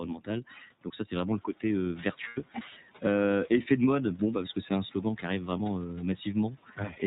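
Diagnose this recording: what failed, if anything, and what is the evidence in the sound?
The codec stage is at fault for the whole clip. The speech is band-limited with nothing above 4 kHz, and it carries a plainly audible rough, slightly synthetic edge. This is the iLBC codec, which codes each frame's excitation independently, and the grain and cut-off fit its 30 ms mode at 13.33 kbps. A simple low-pass filter or analogue bandwidth loss would dull the sound without this rough, modelled texture.

At the network stage, packets were lost from 2.28 to 2.40 s, just after "c'est vraiment le côté". These are lost iLBC frames, about 90 ms, which points to three 30 ms frames. The decoder concealed the gap by repeating the last pitch cycle mixed with noise, so a held, faintly buzzy vowel fills it, and the voice is clean again almost immediately. A dropout would leave silence and a buffer glitch would click. 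The room noise, which rises around 1.5 s, stays separate from this event.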